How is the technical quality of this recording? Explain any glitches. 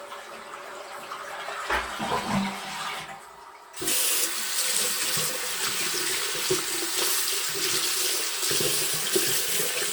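The quality is degraded by one fault that runs through the whole recording.

Generation loss, throughout: the sound was likely decoded and re-encoded about four times with a lossy codec, with character pointing to Opus at around 64 kbit/s. Each pass requantises on a shifted frame grid, so noise accumulates. The result is swirly, hollow and smeared, with blurred attacks, even though content extends up to about 20.1 kHz.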